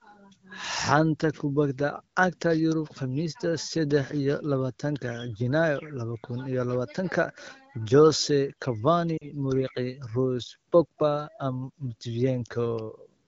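Lost AMR speech frames at 9.17 to 9.31 s: about 40 ms failed their checks, fitting two 20 ms frames. The decoder repeats the last pitch and vocal-tract settings with falling gain, so the sound briefly blurs and dips.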